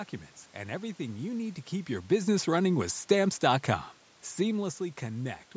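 No technical faults can be heard in this speech recording.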